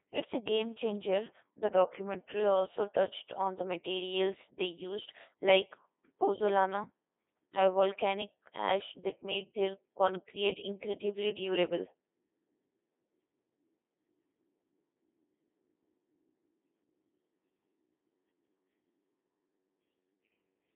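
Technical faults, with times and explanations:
Throughout, Codec 2 vocoder: the speech is rebuilt from sine waves driven by pitch, voicing, energy and a spectral envelope, so it sounds robotic and buzzy. The band runs roughly 250 Hz to 3.6 kHz with nothing above 3.8 kHz, and the heavy damage fits a 2.4 kbit/s mode.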